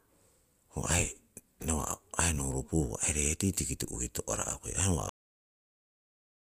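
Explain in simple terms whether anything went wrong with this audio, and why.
Something did go wrong here, and it's at the very end. This is a cut-off end: at about 5.09 s the speech just stops dead, partway through a sound, and from there to the end it's pure digital silence. There's no natural fade or trailing off. What happened is that the last chunks of audio never got written to the file, so the recording was chopped short before the speaker actually finished.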